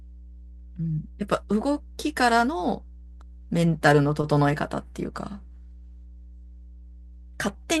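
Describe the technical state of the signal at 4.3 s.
At 4.3 s the speech sits on top of mains hum, a steady 60 Hz tone that runs through the whole clip. Power-line current is leaking into the signal, most plausibly through a ground loop or a nearby transformer, and it lies roughly 20 dB below the speech. Unlike broadband low-frequency rumble from handling or wind, it is a fixed pitch with some low harmonics whose level stays constant whether anyone is talking or not.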